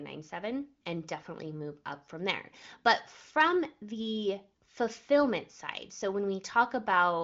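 Nothing stood out on listening to this speech, which carries the usual wideband HD Voice character with no content above about 7.6 kHz.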